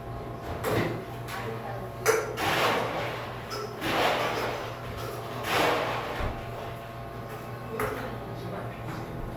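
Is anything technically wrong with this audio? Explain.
No, there are no technical faults in this audio.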